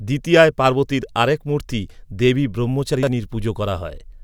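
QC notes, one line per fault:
2.94–3.07 s, chunks out of order: right after "পার্বতীর আরেক মূর্তি দেবী" a roughly 43 ms chunk of speech turns up two chunks late, playing after the two that should follow it. Nothing's missing, but the shuffle gives a short jumbled smear with three hard joins.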